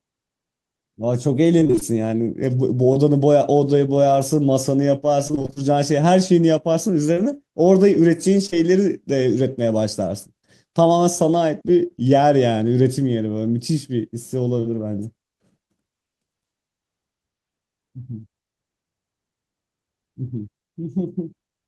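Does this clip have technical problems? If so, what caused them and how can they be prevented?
Yes. Repeated packet loss (robotic sound) occurs twice: from 1.59 to 1.83 s, where six gaps drop about 120 ms of audio, and from 5.27 to 5.58 s, where eight gaps drop about 160 ms. Packets kept arriving lost or late on an unstable network path. Each gap, the longest about 24 ms in the first stretch and 27 ms in the second, was patched by extending the previous sound, so roughly half of each stretch is synthetic and the speech turns choppy with pieces missing. A larger adaptive jitter buffer, forward error correction, or a more stable connection would prevent this.

Short concealed packet loss occurs at 2.93–2.97 s, 7.14–7.18 s, 8.46–8.54 s (two losses back to back), and 14.60–14.64 s. Each time about 20 ms of audio failed to reach the decoder in time. The receiver bridged the hole by continuing the sound just before it and then blending back into the real signal, which leaves a brief smear or wobble and can swallow a short consonant. 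In-band redundancy or a wired connection with less packet loss would prevent these dropouts.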